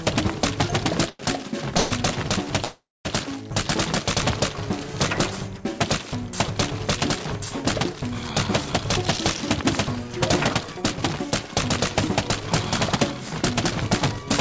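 A packet arrived late at 1.10 s and the jitter buffer briefly ran dry, producing a short stall from a late packet: the receiver held the last sound for about 94 ms, until 1.21 s, then resumed at the same point, so the sound drags with a faint buzz but loses nothing. Two call audio freezes follow, likely from packets held up in transit emptying the buffer. From 1.77 to 1.93 s the last sound is stretched into a fading buzz for 134 ms. From 2.64 to 3.07 s a 409 ms gap opens, about 230 ms of it silent. Playback picks up where it stopped, inserting a pause rather than losing audio. Later, the buffer had built up more audio than it targets, and a jitter buffer speed-up trimmed it by repeatedly cutting out pitch-period-sized slivers. From 9.18 to 12.41 s the sound runs at 106% speed, shedding roughly a fifth of a second. From 12.97 to 14.20 s it runs at 105%, shedding well under a tenth of a second. 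Both stretches sound slightly hurried at unchanged pitch. Throughout, nothing is heard above 8 kHz, which fits a 64 kbit/s G.722 call path.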